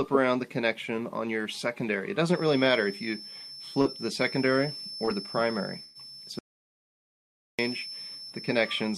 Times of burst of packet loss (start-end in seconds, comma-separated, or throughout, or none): 5.83-5.97